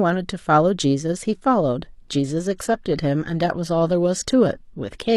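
From 1.88 s to the end, the speech shifts abruptly to a thinner, more synthetic sound, the mark of an adaptive stream at a lower bitrate. When the connection slowed, the player switched to a leaner encoding, which fits a drop from about 96 kbit/s AAC to a 24 kbit/s HE-AAC stream, where the treble is rebuilt rather than carried. Unlike a dropout or buffering stall, there is no gap or pause, only a sudden step down in quality.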